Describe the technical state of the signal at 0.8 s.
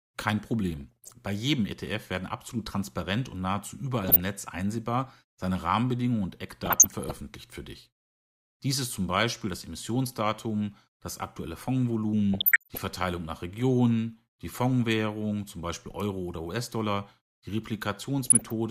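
Short blips of noise in single sub-bands sit over the speech from 0.76 to 1.13 s. This is DAB burbling, where reception bit errors get past the error correction into the MP2 audio data.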